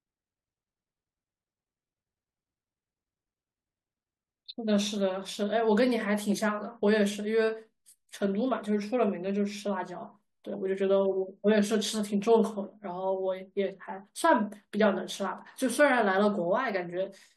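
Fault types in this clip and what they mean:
Nothing to flag here, since the speech comes across without any technical fault worth naming.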